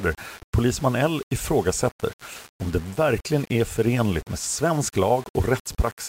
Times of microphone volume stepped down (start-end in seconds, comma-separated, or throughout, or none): none